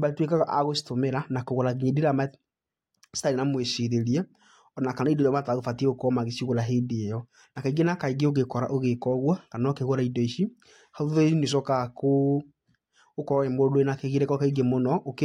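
No technical faults occur at any point in this recording.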